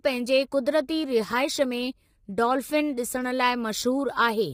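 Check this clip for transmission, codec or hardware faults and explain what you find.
One codec fault runs through the whole speech clip: heavy low-delay AAC compression damage. From start to finish the voice sounds rough and grainy, with a hiss-like fill between harmonics and nothing above 15.6 kHz. The likely cause is AAC-ELD coding, and the degree of damage fits a bitrate around 24 kbps. Its short frames resolve pitch harmonics poorly, and at this low bitrate bits run short. A spectrogram shows smeared, noise-filled gaps between harmonic lines and a hard ceiling at 15.6 kHz.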